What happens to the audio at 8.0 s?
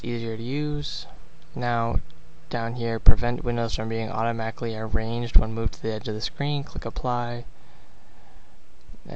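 At 8.0 s you're hearing the same thing that runs through the whole clip: a dull top end with a gurgling, granular edge, likely from MP2 compression at a rate that fits about 80 kbps, starving the upper sub-bands of bits until they drop out and leaving the rest coarsely quantised.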